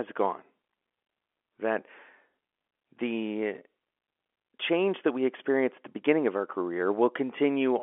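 No technical faults are audible anywhere in this speech.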